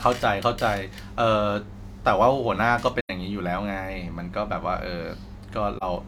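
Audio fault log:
3.01–3.10 s and 5.77–5.83 s: AAC frame loss with muting. The speech drops into soft-edged gaps, about 85 ms then 43 ms, which fits two lost frames then one. Overlapping windows fade each gap smoothly.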